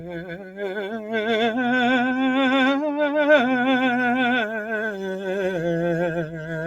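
A noise suppressor applied to music runs through the whole clip. It treats sustained parts of the music as noise and pulls them down, so the level swings by roughly 5 dB. Held tones and tails sink while attacks pass through. The result pumps and thins. Sound cut by the noise suppressor is clearest at two points. From 0.0 to 1.11 s the opening drops by about 11 dB, for about a second. Sustained material there sits well below the attacks. From 6.26 to 6.52 s it dips again by about 6 dB. This is a brief dip near the end.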